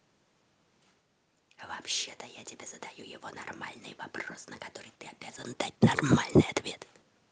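Nothing's wrong with this bit of speech; it's come over a call connection, and the top end rolling off around 12 kHz fits an Opus stream at about 32 kbps.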